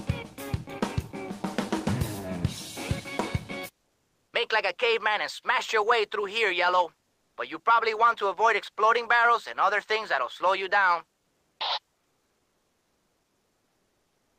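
With transmission likely paused by Opus discontinuous transmission, comfort noise replaces the background from 7.07 to 7.37 s and from 11.21 to 11.59 s: the faint, detailed ambience becomes flat synthetic hiss, about 5 dB quieter in the first gap and about 2 dB louder in the second.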